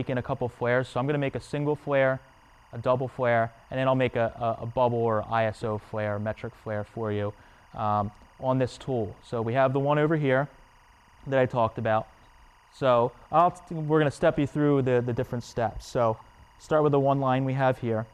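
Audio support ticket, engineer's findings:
Timecode bleed, whole clip. LTC from an adjacent track or cable coupling into the audio path. Steady chirping warble behind the sound, roughly 1 kHz and 2 kHz tones switching, about 35 dB below programme. The chirp rate fits 23.976 fps code. Check routing, shielding and crosstalk between tracks.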